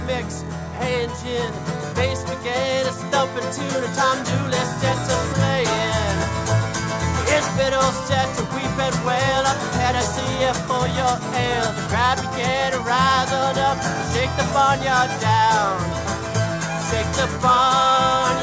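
The resampler restarted on every block. The conversion, which fits a 48 kHz source going down to 16 kHz, handled each 10 ms block in isolation, so at every block edge the filter worked from silence or wrapped-around samples instead of the true neighbouring sound. That leaves a small error at each boundary, and with blocks this short the errors fuse into a steady 100 Hz buzz riding on the audio throughout, present only while there is signal.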